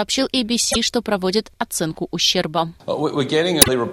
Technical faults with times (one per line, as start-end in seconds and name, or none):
0.69-0.76 damaged data in a compressed stream
3.59-3.69 damaged data in a compressed stream